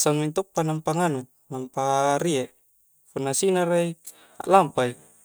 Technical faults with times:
0.56 electrical switching spike

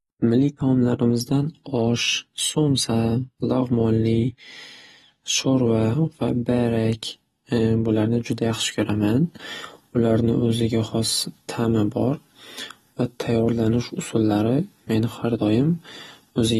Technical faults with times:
0.00-16.59 AAC compression

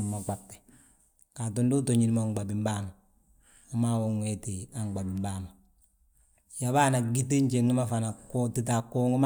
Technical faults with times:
none

